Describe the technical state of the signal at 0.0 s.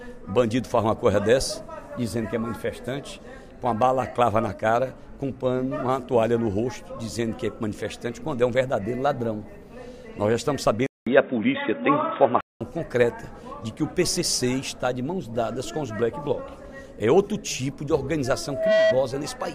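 The signal at 0.0 s is intact, with no technical fault at that moment.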